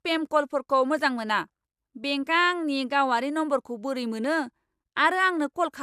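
The speech has likely been through repeated lossy encoding, decoded and re-encoded about ten times, with each pass quantising again on a shifted frame grid so the noise and spectral gaps pile up. That generation loss runs through the whole clip: the sound is swirly, smeared and hollow, consonant attacks are blurred, and nothing reaches above about 15.9 kHz. The character fits a chain of MP2 passes at 128 kbit/s.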